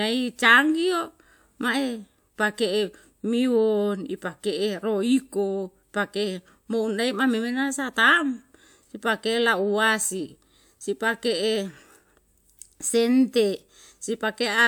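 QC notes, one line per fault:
No faults found in the speech. Nothing needs logging against this clip.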